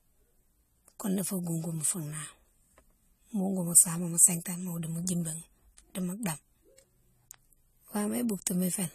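From start to finish the speech sounds dull and smeared, with nothing above 14 kHz and a clearly audible watery, fizzy texture. That's likely AAC compression, with the encoder starving the upper bands, which fits AAC-LC at a low bitrate around 32 kbps.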